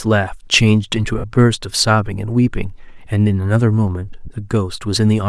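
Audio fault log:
throughout: Bluetooth LC3 compression. The speech has a breathy, grainy edge, with the upper frequencies sounding thin and hissy instead of crisp, and the damage is plainly audible. This is likely LC3 coding over Bluetooth LE Audio. The codec works on short transform frames, and when bits run short it drops much of the top of the spectrum and fills the gaps with shaped noise. The result fits a bitrate around 48 kbps with 10 ms frames.
1.18–1.24 s and 4.25–4.28 s: lost LE Audio frames. The speech briefly turns into a noisy, smeared wash for about 60 ms at the first point and about 30 ms at the second. Audio frames failed to arrive, so the decoder filled each gap by repeating the last spectrum it had with randomised signs. That keeps sound going but scrambles its detail. The gap lengths fit roughly six and three 10 ms frames.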